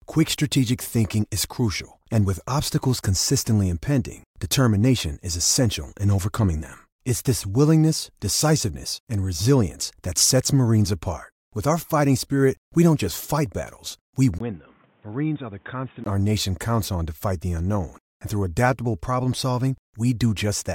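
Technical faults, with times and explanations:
14.38–16.06 s, input switched to a poorer device: after "just fight battles we", a 20 ms gap, then the speech drops about 10 dB and turns boxy, with nothing above 3.8 kHz and new hiss about 30 dB down. It is likely a narrower-band microphone taking over until "our nation counts on".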